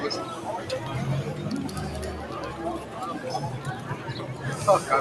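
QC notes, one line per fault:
Throughout: noise suppressor applied to music or sounds. A suppression stage tuned for speech stays active across the whole clip, treating steady tones, ambience and decay tails as background noise to be removed. As the sound settles into sustained content, the processor turns it down, then releases when the signal changes again, so the level swings by roughly 5 dB. That repeated dipping and recovery is heard as pumping, with held parts and tails sounding thinned.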